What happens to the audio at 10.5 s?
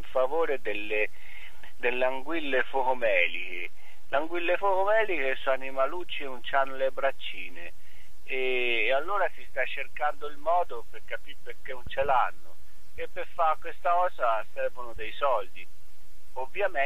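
Nothing goes wrong at 10.5 s; the audio there plays through intact, with no dropout, glitch or other fault.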